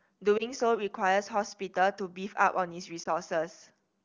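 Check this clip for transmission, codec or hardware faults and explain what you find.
Two short dropouts are present, both from lost AMR speech frames, in wideband speech that sounds consistent with a high AMR-WB rate. The first falls at 0.37 to 0.43 s and the second at 3.03 to 3.08 s. Each is a brief dip or warble, consistent with a single 20 ms frame failing its checksum. The decoder filled the gap by repeating the previous pitch and vocal tract settings at reduced gain, and the speech recovers almost at once.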